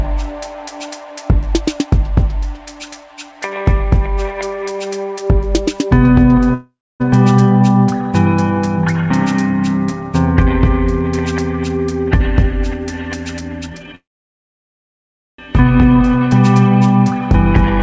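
At 6.54 s the sound stalls into a short fading buzz and then about 0.27 s of silence, resuming at 7.02 s where it left off, with nothing lost. This call audio freeze was likely caused by delayed packets draining the jitter buffer, which inserted a 0.46 s gap.

From 13.41 to 13.95 s the audio rushes at about 147% speed with its pitch unchanged. This jitter buffer speed-up happened because the receiver, holding too much audio, cut repeated pitch-period slices totalling roughly 0.3 s to shrink the delay.

A second call audio freeze follows at once, from 13.95 to 15.40 s. The sound drops almost straight to silence for about 1.37 s and then continues intact. The likely cause is another stall in packet arrival, which put a 1.43 s gap into the audio.

Throughout the clip, nothing is heard above 8 kHz, which fits a G.722 call codec at 64 kbps.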